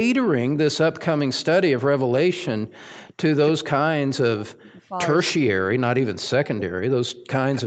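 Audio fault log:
3.65–4.96 s, 5.33–6.74 s and 7.1–7.26 s: speech suppressed in double talk. The speech sinks sharply in level, by about 40 dB at its deepest. The first two stretches lose roughly a second of sound each. The last loses only a brief piece. The likely cause is both sides talking at once. The echo canceller could not tell the local talker from the loudspeaker echo, so it turned both down.
4.64–4.72 s and 7.54–7.62 s: echo leak. A short, faint repeat of the speech appears, trailing it by 238 ms. The first scrap sits about 30 dB below the speech and is barely there. The second is louder, about 15 dB below, and easier to catch. Each lasts only a brief moment. These are likely from a loudspeaker on one side of the call whose echo canceller left some residue, which was sent back down the call.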